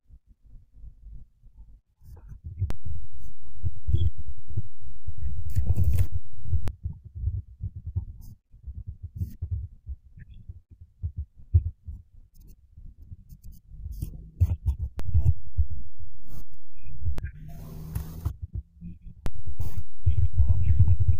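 Speech with three DC steps, from 2.70 to 6.68 s, 15.00 to 17.18 s and 19.26 s to the end. Each time the zero line shifts by about -18, -19 and -16 dBFS, and low thumps mark each jump.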